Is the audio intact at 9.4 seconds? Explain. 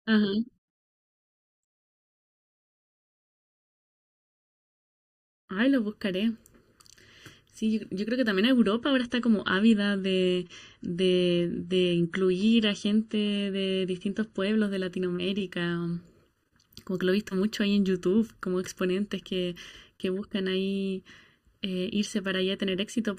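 No. From 8.57 to 14.57 s the stream drops to a lower-bitrate version, as an adaptive stream does when the connection slows. Quality falls abruptly without a gap: nothing survives above 11.1 kHz and codec artefacts rise, which points to a fall from about 128 to 48 kbit/s MP3. Throughout the clip, channel delay causes comb filtering. One channel lags by about 0.7 ms, and summing to mono cancels evenly spaced frequencies starting near 700 Hz, which leaves the speech hollow and phasey.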